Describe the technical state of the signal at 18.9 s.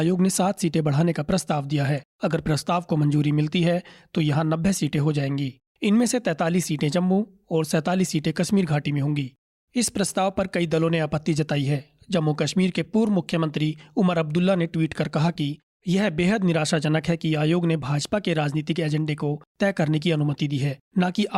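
At 18.9 s the speech signal is intact, with no fault present at that moment.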